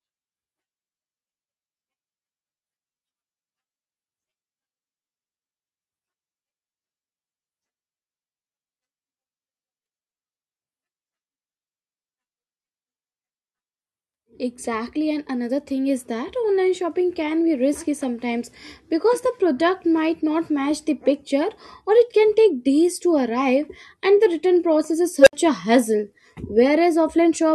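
Just after "the return process is", at 25.20 s, a tone of around 500 Hz swells to a harsh clipped squeal within about 69 ms, then cuts to 64 ms of silence before "a hassle". It's an unstable filter: a recursive filter's output ran away, clipped and overflowed until it reset.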